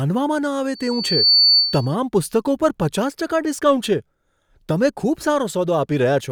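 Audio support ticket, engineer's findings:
Loudspeaker feedback squeal, 0.74–1.96 s, ending just before "પુસ્તકો પર પચાસ". Single 4.5 kHz tone swelling over about half a second to roughly 5 dB above the speech. Mic to loudspeaker loop gain above unity at 4.5 kHz. Growth rules out steady electrical whine or hum.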